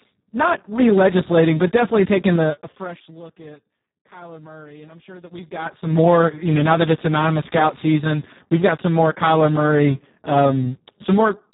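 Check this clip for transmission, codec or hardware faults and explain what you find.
Two faults are present: heavy Speex codec damage across the whole clip, and two bursts of zipper noise during level changes.

Speex codec damage runs from start to finish. The speech sounds hoarse, buzzy and close to robotic, the mark of a CELP coder starved of bits for its excitation signal, which fits a very low setting around 4 kbps. On a spectrogram the energy stops abruptly at 3.8 kHz, with an empty band above. Harmonic striations look smeared and grainy rather than cleanly spaced.

Zipper noise appears twice. From 2.32 to 3.20 s, just after "but definitely", the level falls by about 25 dB. From 5.20 to 6.04 s, just after "and I'm sure", it rises by about the same amount. Each change is made in unsmoothed 2 dB jumps, around fifteen a second, and every jump leaves a small click, heard as a rapid ticking over the fade. 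The waveform envelope shows a staircase instead of a ramp, and the spectrogram shows faint vertical lines at each step.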